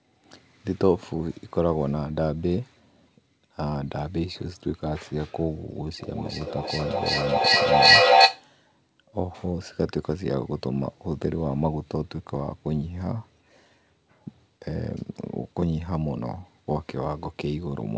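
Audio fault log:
5.99–8.48 s, feedback echo between two devices: a nearby device's playback gets picked up again, repeating roughly every 0.4 s and piling up to about 11 dB over the speech.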